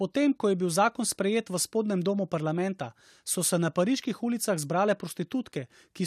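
Nothing goes wrong anywhere in this speech recording; there's simply no fault to point to at any moment.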